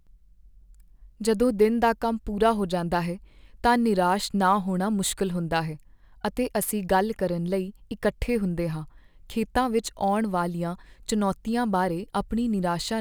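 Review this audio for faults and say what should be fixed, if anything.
Sample clock jitter runs throughout: the converter clock wanders by roughly 3 microseconds, so samples land slightly off time, leaving a rough hiss about 35 dB below the speech. Unlike a steady noise floor, it swells on loud, bright sounds and vanishes in pauses. Prevent it by clocking the converter from a stable, low-jitter reference.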